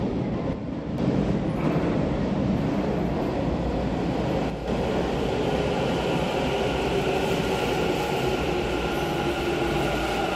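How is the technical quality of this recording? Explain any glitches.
The recording has two short level dips. From 0.53 to 0.98 s and 4.50 to 4.68 s the sound abruptly drops by about 6 dB, likely one channel dropping out and halving the mono sum.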